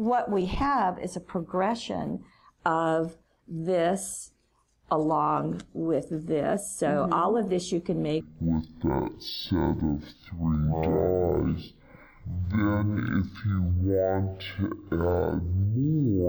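From 8.21 s to the end, stereo read as mono: interleaved left and right samples play as one channel, so the sound runs at half speed, a full octave lower.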